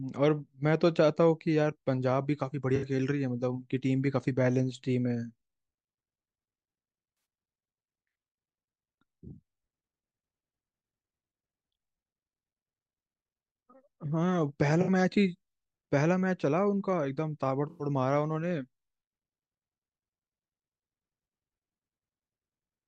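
AAC frame loss with concealment shows up four times, at 2.76–2.84, 7.15–7.25, 14.81–14.89 and 17.69–17.85 s. Each time the decoder patches roughly 64 to 107 ms of missing frames from the last good spectrum, so the speech briefly turns smeared and phasey.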